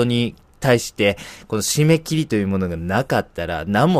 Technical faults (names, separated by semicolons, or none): none